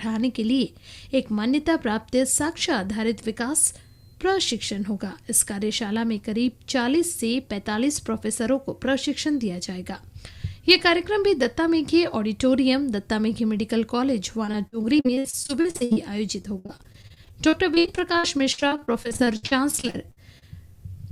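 The audio breaks into repeated packet loss, giving a robotic sound, from 14.45 to 15.98 s and again from 16.42 to 20.44 s. Short holes, up to 60 ms each, are patched by stretching the last sound. Roughly a third, then a quarter, of each stretch is filled this way, so it sounds choppy, with pieces missing.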